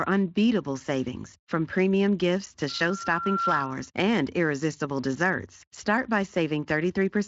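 From 2.69 s to 3.89 s, a single steady tone at 1.4 kHz swells out of the speech over most of a second until it sits about 5 dB above it, then stops. This is loudspeaker feedback squeal. The microphone was hearing the loudspeaker it fed, and at 1.4 kHz the loop returned more than it received, so that tone built on itself. Under it runs a light speech-codec texture with nothing above 7.5 kHz, which points to Speex at 23.8 kbps.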